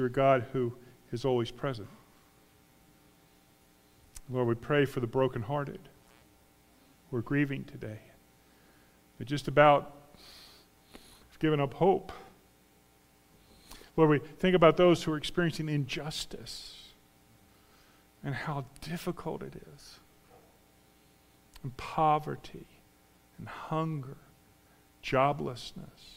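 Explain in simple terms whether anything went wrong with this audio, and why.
Nothing went wrong here.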